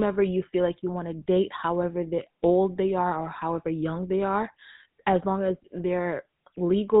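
Throughout, the speech shows plainly audible GSM full-rate codec damage, a buzzy, gravelly roughness, which fits 13 kbps coding. On a spectrogram, everything above 4 kHz is empty.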